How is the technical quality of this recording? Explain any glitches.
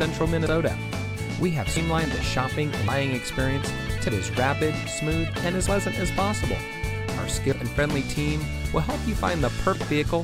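The recording is marred by repeated skips. The likely cause is a dropped buffer (overrun): the capture software fell behind, the hardware overwrote samples it had not yet collected, and the surviving audio was spliced straight together. Each splice is an abrupt jump forward, with no gap of silence, at 0.46, 1.77, 2.88, 4.09, 5.67, 6.60, 7.52 and 9.75 s. Each jump skips roughly a tenth to three tenths of a second, with the longest at 4.09 s.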